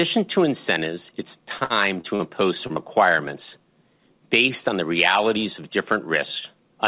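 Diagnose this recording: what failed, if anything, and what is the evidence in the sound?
Repeated packet loss (robotic sound) failed at the network stage, from 1.58 to 2.22 s, just after "to incentives it's". The sound turns choppy there. Four holes open in quick succession. The longest is 60 ms, and about a quarter of the span is synthetic fill. Each time, the receiver stretched the last received sound to cover the gap. Because the gaps arrive back to back, those patches leave the speech choppy with pieces missing.

Short concealed packet loss, also network, follows at 2.67 to 2.73 s and again at 2.73 to 2.79 s. Each event drops about 30 ms, and the two sit directly against each other. They come across as a brief smear or wobble rather than a clear dropout. The decoder again continued the preceding sound and blended back into real audio. The band stops at 4 kHz throughout, which fits a narrowband G.711 call path.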